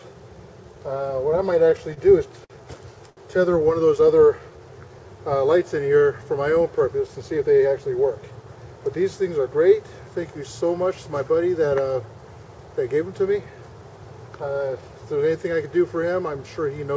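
From 1.47 to 1.99 s the sound stutters repeatedly. These are repeated stalls. Packets arrived late, and the jitter buffer ran dry four times in about half a second. Each time, the receiver kept the last sound going until fresh data came in. The longest hold is 27 ms. About 57 ms is filled in all, roughly a tenth of that span. Nothing is lost. The sound just drags and catches.

Two short stalls from late packets follow. At 2.45 to 2.52 s, one packet was not there when it was due. The receiver stretched the last sound for 52 ms, then resumed where it left off. At 3.10 to 3.19 s the same thing happens, with a 71 ms hold. Each leaves a sound held too long, with a faint buzz or dip. Each also pushes playback later by the length of the hold.

From 4.01 to 5.08 s comes a jitter buffer slow-down. The buffer was running low or had just raised its target delay, and needed a reserve. So the receiver repeated single pitch periods and slivers of pauses, over and over. 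This adds 86 ms. The sound runs at about 93 percent speed with no change in pitch. It comes across as slightly drawn out, perhaps with a mild warble.

From 7.07 to 7.80 s there is a jitter buffer speed-up. Now the buffer held more than its target. The receiver trimmed tiny pieces, one or a few pitch periods at a time, about a tenth of a second in total. Playback runs at about 114 percent speed, pitch unchanged. It sounds hurried.

Throughout, the call path shows no content above 8 kHz, which fits the G.722 codec.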